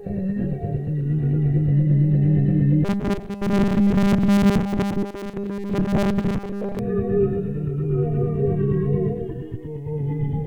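From 2.85 to 6.79 s the audio takes on a robotic sound from repeated short buffers: a rigid, metallic buzz at 200 Hz. This is likely caused by new audio arriving too late, so a 5 ms segment is replayed in place of most of the real signal.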